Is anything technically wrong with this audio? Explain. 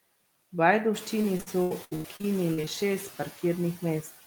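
Yes. The speech carries two faults.

Noise suppressor artifacts run through the whole clip. The suppressor lowers the bands it treats as steady noise by about 17 dB, frame by frame. The background noise sinks between phrases and swells under speech. This is most noticeable after about 1 s, where the room noise rises by about 11 dB.

Repeated packet loss (robotic sound) occurs from 1.21 to 2.68 s. Audio drops out in a rapid series of short holes, pointing to around eleven lost or late packets, the longest about 89 ms. Each hole is bridged by stretching the preceding sound, and about 31% of the stretch is filled this way. The speech turns choppy, with fragments missing.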